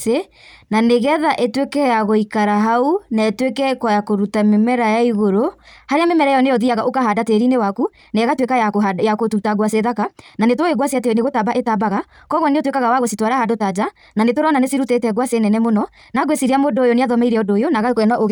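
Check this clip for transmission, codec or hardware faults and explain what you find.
One fault is present, a time-stretched section. From 5.60 s to the end, the speech runs about 1.76 times faster at unchanged pitch, sounding rushed. Software likely compressed it to fit a length by dropping short segments. On a spectrogram, harmonics hold their frequency while syllables crowd together; the waveform shows denser envelopes with abrupt joins.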